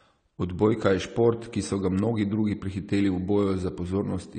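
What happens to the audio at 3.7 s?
At 3.7 s you're hearing the same thing that runs through the whole clip: likely AAC compression at a low bitrate, around 32 kbps by the sound of it. Everything above 9 kHz is gone, so the speech sounds dull, and the coarse quantisation leaves it smeared, with a fizzy, warbling edge on sibilants.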